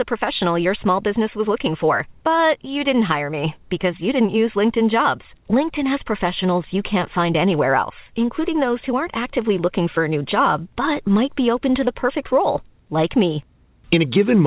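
No technical faults can be heard in the speech, which comes through a normally working call path with nothing above 4 kHz, a narrowband sound that fits G.711 mu-law coding at 64 kbps.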